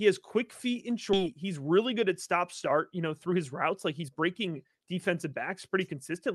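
At 1.13 s the speech lurches abruptly forward with no gap. This skip ahead dropped about a second of audio and spliced the two sides together almost directly. From 1.23 s to 5.94 s the talk sounds hurried but keeps its pitch. This jitter buffer speed-up trimmed short pitch-period pieces, about 0.4 s in all, to run at 109% and shed excess delay built up in the Opus call path, whose band tops out near 12 kHz.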